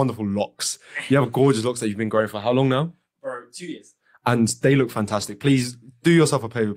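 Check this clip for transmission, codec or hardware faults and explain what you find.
One codec fault stands out: a call bitrate drop from 4.52 to 5.71 s. The encoder falls from 40 to 16 kbps and stays at the low rate for about 1.1 s, coding the speech more coarsely and trimming its top end. Unlike packet loss, the speech stays continuous, with no gaps or repeated fragments, just a rough, muffled stretch.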